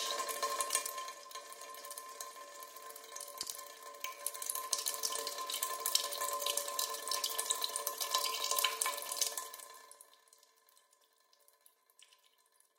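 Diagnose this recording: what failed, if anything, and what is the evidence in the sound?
Ticking zipper noise rides the level moves at 0.68–1.20 s (down about 10 dB), 4.10–5.12 s (up) and 9.30–10.33 s (down about 20 dB). The gain stage applies the changes in unsmoothed 2 dB steps.

Two sharp loud pops at 3.43–3.54 s jump well above the sound, which continues underneath. This is likely an electrical transient, such as a plug or switch, in the analogue wiring.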